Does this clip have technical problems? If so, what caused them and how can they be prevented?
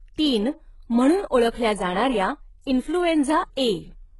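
Yes. Throughout the speech there is heavy HE-AAC compression damage: the treble sounds synthetic, with sibilants coming out gritty and metallic, and nothing above about 11.4 kHz. This is likely HE-AAC at a very low bitrate, which fits roughly 12 kbps. The codec keeps only the lower spectrum and rebuilds the upper bands by copying lower ones upward under a coarse envelope, so the treble's harmonics no longer line up with the real ones. Encoding at a higher bitrate, or with plain AAC or Opus at a sufficient rate, would prevent this.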